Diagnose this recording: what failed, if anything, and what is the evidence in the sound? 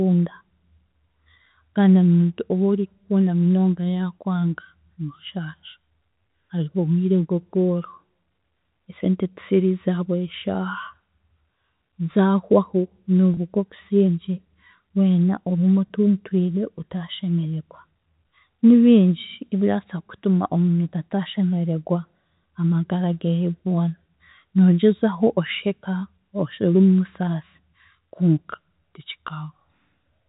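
The fault is at the network stage: packet loss with pitch repetition. At 13.34–13.37 s and again at 15.88–15.90 s, right after "weena ogume", the sound briefly holds a slightly buzzy tone. About 30 ms and then 20 ms of audio went missing, which suggests three and then two lost packets of roughly 10 ms each. The receiver bridged each gap by repeating the last pitch period. On a waveform this appears as identical copied cycles, and on a spectrogram the harmonics go briefly flat and stop following the voice. The G.711 telephone coding, band-limited to 4 kHz, is otherwise working normally.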